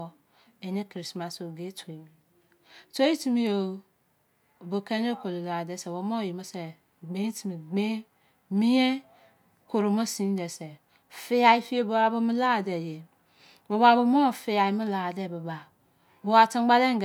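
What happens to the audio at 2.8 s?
At 2.8 s the speech runs on cleanly, with no dropout, click, distortion or other fault.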